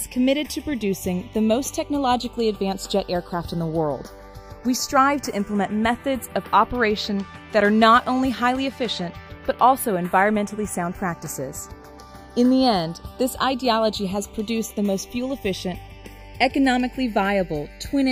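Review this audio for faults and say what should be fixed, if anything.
Channels drifting apart, throughout: the inter-channel delay creeps to about half a millisecond, consistent with clocks around 50 ppm apart, so the mono sum flanges slowly. Prevent it by recording both channels on one interface or locking both devices to a shared word clock.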